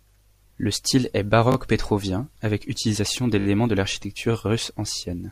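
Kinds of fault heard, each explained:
Repeated buffer: late audio made the device replay its last slice, fitting a 20 ms buffer, heard as stutters with no gap, unlike a dropout.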